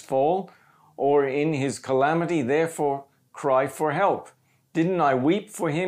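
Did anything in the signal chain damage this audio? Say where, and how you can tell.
No, nothing in this speech recording points to damage anywhere along the signal chain, so there's nothing to trace back to a particular stage.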